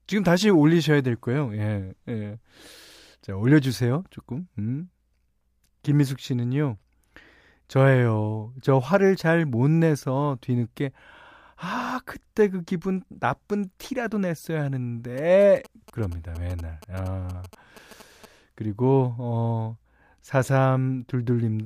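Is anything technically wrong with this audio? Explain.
Yes. GSM signalling bursts run from 15.18 to 18.26 s. A nearby 2G phone's radio pulses, rectified by the audio circuit, give galloping ticks and short 217 Hz buzzes, unlike steady mains hum.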